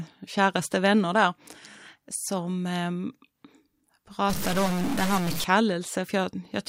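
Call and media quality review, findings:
Stuck bit, 4.30–5.44 s: harsh buzzy distortion over the speech, pauses filled with noise. Likely a data line or converter bit held at a fixed value, adding an error step of about -25 dBFS to roughly half the samples. Unlike clipping, the distortion isn't limited to loud peaks. Unlike bit-depth reduction, quiet gaps fill with noise instead of falling silent, and the noise starts and stops abruptly with the span.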